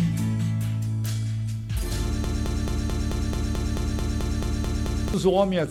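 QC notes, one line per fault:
2.24–5.14 s: broken-record loop, a 0.22 s fragment repeating exactly 13 times back to back, likely a stalled player resending its last buffer, losing the intended audio.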